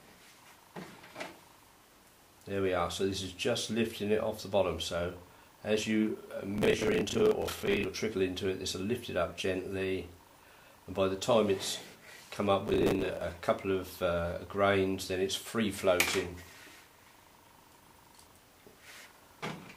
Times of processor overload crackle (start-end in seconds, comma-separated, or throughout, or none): 6.56-7.85, 12.68-13.21